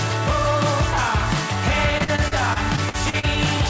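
From 1.98 to 3.25 s there's repeated packet loss, robotic sound: short holes up to about 42 ms keep getting patched by stretching the last sound, leaving it choppy.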